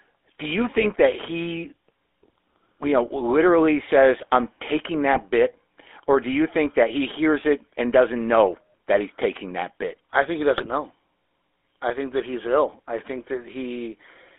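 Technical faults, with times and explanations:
Throughout: GSM full-rate codec. The speech has a buzzy, gravelly roughness. The codec models the vocal tract and excites it with sparse, regular pulses, discarding most excitation detail. The band runs only from about 300 Hz to 3.5 kHz, which fits 13 kbit/s full-rate coding.
0.78–0.85 s, 5.13–5.23 s, 10.56–10.67 s: GSM bit errors. Each burst brings squawks, pops and gargling lasting about a tenth of a second. Corrupted filter, pitch or gain values make the decoder warp the spectrum or spike the level, pointing to roughly 1 to 2 percent of bits flipped.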